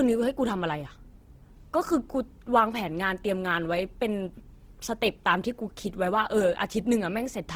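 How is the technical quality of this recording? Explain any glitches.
Plainly audible Opus compression runs through the whole speech recording. It is likely a low-rate Opus encode in music (CELT) mode, which fits roughly 16 kbps. Starved bands are filled with folded or noise content, so tones sound grainy and rough rather than swirly as with MP3, and the bandwidth still reaches about 20.3 kHz.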